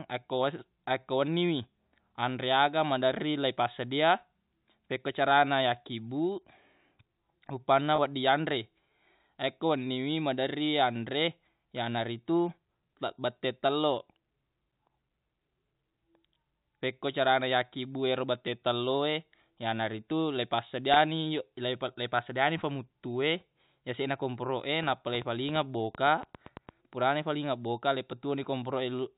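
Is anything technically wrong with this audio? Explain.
Yes, two kinds of fault can be heard in this speech clip.

At 7.96–7.98 s and again at 20.94–20.96 s, the sound briefly holds with a slightly buzzy, sustained tone. This is packet loss with pitch repetition: about 20 ms of audio went missing, consistent with a single lost packet, and the receiver filled it by repeating the last pitch period.

From 24.83 to 26.70 s, a train of clicks ticks over the speech and through the pauses, around fifteen similar pops at an uneven pace of about 6.5 per second, peaking roughly 5 dB above the speech. The likely cause is interference from nearby equipment or a faulty connection or power supply injecting pulses.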